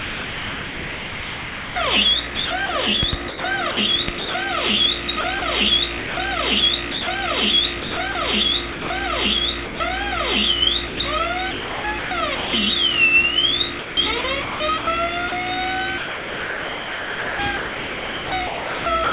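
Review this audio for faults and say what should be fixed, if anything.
Choppy audio runs across four stretches: 0.0–4.34 s (about 2.3 s replaced), 5.21–9.8 s (about 0.9 s), 10.88–12.53 s (about 0.75 s) and 13.79–19.1 s (about 3.15 s). The likely cause is sound chopped by the voice detector at the sender. It toggled transmission repeatedly, so quieter portions were dropped and filled with comfort noise. This happened on top of the G.711 mu-law call path, whose band stops at 4 kHz. To prevent it, disable VAD/DTX at the sender or raise its hangover time and lower its activity threshold.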